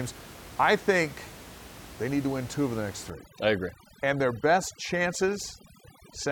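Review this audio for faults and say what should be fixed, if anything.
From 3.1 s to the end of the clip, overdone noise removal sets in. The noise reduction is working far too aggressively, pulling individual frequency bands down or off whenever they come near its noise estimate, and the softer parts of the speech are caught with them. The room noise, about 18 dB below the speech before this point, drops and breaks up into twinkling specks.

Lowering the reduction strength so it removes only a few decibels and leaves bands near the noise floor intact would prevent this.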